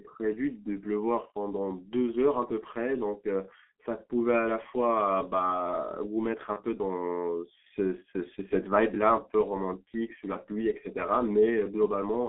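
From the start, the speech carries the signature of the G.723.1 codec. The band is confined to roughly 250 Hz to 3.4 kHz, and the heavy coding damage leaves the voice muffled and hoarse, with smeared consonants. This points to a very low rate near 6.3 kbit/s working in 30 ms frames, with a slowly updated voice model. A plain telephone band-limit would narrow the sound without this roughness and blurring.

From 6.53 to 6.60 s, VoIP packet loss concealed by the speech codec shows up as a short stretch where the decoder keeps repeating its last pitch and filter at falling gain. The result is a brief buzzy tone or coloured noise that fades, in place of real speech, which fits a single lost 30 ms frame. A hard dropout would leave silence or a click. Here the sound is smoothed over, and the voice stays weak or distorted just after 6.60 s while the decoder recovers.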